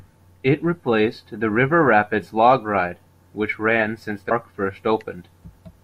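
At 4.3 s, just after "which ran since the", the speech jumps forward. This is compressed frames skipped. About a fifth of a second of audio never plays, which fits several whole frames of about 26 ms each going missing.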